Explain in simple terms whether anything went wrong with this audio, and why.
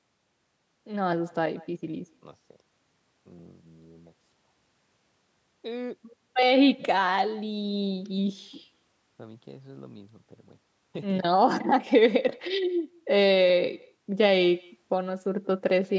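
Yes, something went wrong. There is an echo with no canceller, heard all the way through. The other end played the call out loud, and its microphone sent it back. So every phrase returns about a fifth of a second later, as a faint, thin copy.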